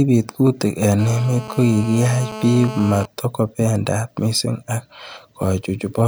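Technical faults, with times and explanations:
0.99 to 3.06 s, GSM phone buzz: a hard, raspy buzz sits under the speech at a steady 217 Hz, rich in harmonics and about 13 dB below the signal, with no relation to what is being said. A nearby 2G phone on a call is transmitting its radio bursts 217 times a second, and the audio circuitry rectifies those pulses into audible clicks that fuse into this constant, gritty tone.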